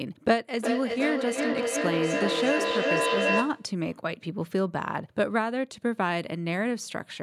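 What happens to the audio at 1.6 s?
Feedback echo between two devices runs from 0.58 to 3.8 s, covering 1.6 s. A second device in the room replays the call, this microphone picks it up again, and its echo canceller misses it, so each word returns roughly every 0.4 s, thinner and ringing, peaking about 1 dB above the speech.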